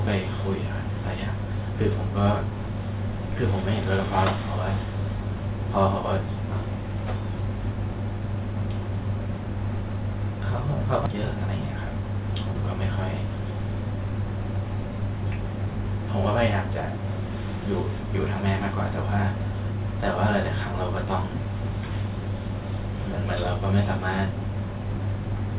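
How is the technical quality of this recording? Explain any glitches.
The recording has two timing glitches close together, heard through narrowband call audio that stops at 4 kHz, which fits a G.711 mu-law call path.

At 11.06 s there is a skip ahead. About a second of speech was discarded and the two sides were spliced with no silent gap, unlike a dropout.

From 11.32 to 12.83 s, a jitter buffer speed-up trims pitch periods, removing roughly 100 ms. Speech runs about 7% faster at unchanged pitch, which distinguishes it from resampling.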